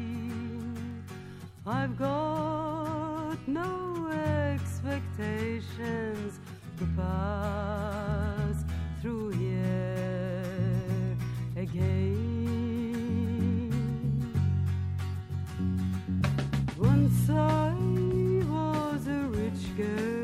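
From 8.15 to 8.81 s there are CD scratch ticks. Four short clicks arrive at a steady rate, about six per second. Each is very brief, the longest well under a millisecond. The regular spacing follows the disc's rotation. A scratch or blemish passes under the laser once per turn. It wipes out more data than error correction can restore, so the player fills in or mutes those few samples. The result is a rhythmic ticking.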